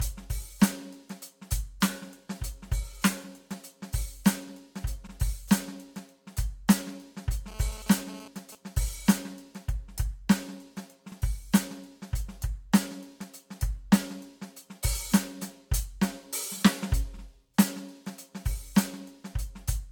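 Throughout the music there is a swirly, smeared, hollow quality, attacks are blurred, and nothing is present above 17.1 kHz. This is generation loss, likely from roughly four rounds of lossy encoding, which fits AAC at around 96 kbit/s, each pass adding fresh noise and spectral holes.

From 5.07 to 5.12 s a brief stutter and click interrupts the sound. These are overlapping chunks: a new 6-second chunk began before the previous one finished, so about 48 ms of audio plays twice at the join.

Between 7.48 and 8.55 s a hard, raspy buzz at 217 Hz, rich in harmonics and unrelated to the music, cuts in and out at about 18 dB below the signal. This GSM phone buzz comes from a nearby 2G phone transmitting bursts during a data transfer, with the audio circuit rectifying the radio pulses.

At 11.12 to 11.17 s the same overlapping-chunks stutter returns, about 6 s after the first, again repeating about 48 ms.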